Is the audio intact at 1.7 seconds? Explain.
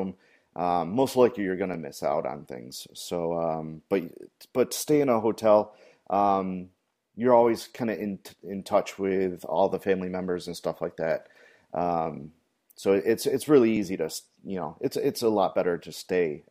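No, there's an overlapping-chunks glitch at 1.74 s, between "likely you're going to" and "to miss out on": about 7 ms replays where 3-second chunks join, giving a click-stutter.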